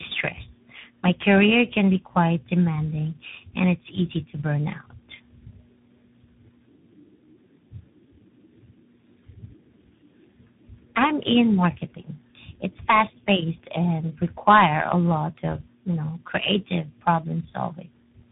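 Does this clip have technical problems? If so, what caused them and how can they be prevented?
Yes. Tandem speech coding runs throughout: G.729A, then G.711, then CVSD re-encoding each prior decode, compounding roughness and warble. A spectrogram shows smeared harmonics and nothing above 3.8 kHz. Prevent it by passing the coded stream transparently between networks instead of decoding and re-encoding at each border.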